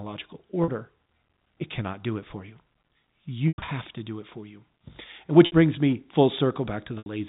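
Packet loss with pitch repetition occurs at 0.64 s (40 ms), 3.48 s (140 ms scattered across 200 ms, ending before "to do it for"), 5.46 s (60 ms, before "brings me") and 6.98 s (80 ms). The last pitch period is repeated to fill each gap. The 40 ms dropout sounds like a briefly held buzzy tone. The longer runs fade toward silence before the speech cross-fades back within the 4 kHz telephone band.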